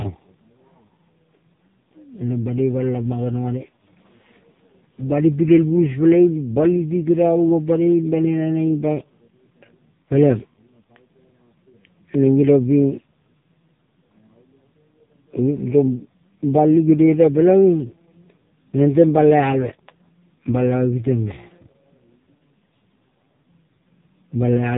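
A speech clip with AMR narrowband mobile codec damage throughout: nothing above 3.8 kHz, heavy buzzy, synthetic artefacts, which fits AMR-NB's lowest bitrate modes, around 5 kbps.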